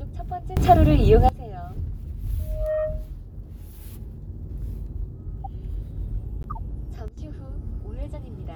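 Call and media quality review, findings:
Sudden gain jump, 0.57 to 1.29 s: level steps up about 19 dB, then drops back. Likely an unramped digital gain change in the capture or mix stage. Background noise rises and falls with the sound, and the edges are instant, not swells. Sudden gain jump, 7.08 to 7.18 s: brief step down about 13 dB, same abrupt edges, noise floor dropping with it. This separates both from feedback, which grows gradually.

Loudspeaker feedback squeal, 2.39 to 3.10 s: single 620 Hz tone swelling over roughly a third of a second to around 10 dB above the program sound. Mic-to-speaker loop gain exceeds one at that frequency. It is one sustained pitch that builds on itself. A corrupt frame gives a short spread-out burst instead.

Corrupt frame decoded, 5.44 s: faint error, a couple of frames long, quiet at around -35 dBFS. Corrupt frame decoded, 6.41 to 6.59 s: longer error across several frames, louder at around -25 dBFS. 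Damaged codec frames decoded anyway, putting energy at wrong frequencies. No build-up, no steady pitch, and they stop on frame boundaries, unlike feedback.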